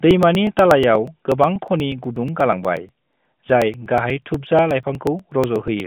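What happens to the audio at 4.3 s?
At 4.3 s the sound sits inside a run of periodic USB or driver dropouts lasting from 0.11 s to 5.8 s. Every 0.121 s, a blocked bus or driver skips roughly 4 ms of speech. Where speech is sounding, each gap gives a regular tick or pop.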